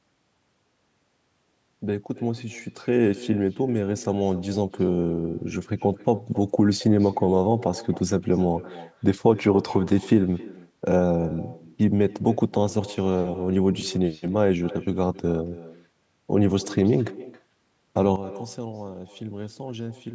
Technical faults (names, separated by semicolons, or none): echo with no canceller; sudden gain jump